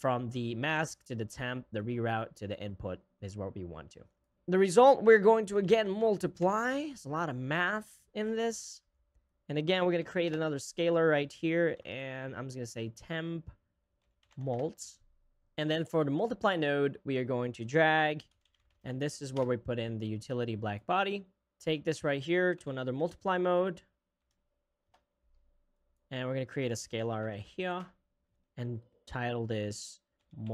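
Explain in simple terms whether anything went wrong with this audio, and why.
Nothing went wrong here; I listened all the way along and didn't hear a single glitch, dropout or odd noise that would point to a technical problem.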